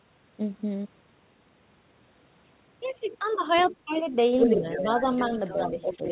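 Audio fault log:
3.56–3.74 s, 3.93–4.12 s and 4.39–6.11 s: other side's voice leaking through. A second voice sits under the speech, about 20 dB, then about 35 dB below it, then roughly as loud. This is likely loudspeaker echo the canceller missed.
3.71–3.94 s, 4.47–4.65 s and 5.97–6.05 s: speech suppressed in double talk. The speech dips by about 10 dB, about 5 dB, then about 10 dB in short pieces. This is likely the echo canceller pulling down both talkers at once.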